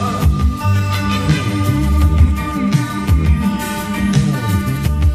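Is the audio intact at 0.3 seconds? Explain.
Yes, at 0.3 s the audio is intact, with no dropout, click, distortion or other fault at that moment.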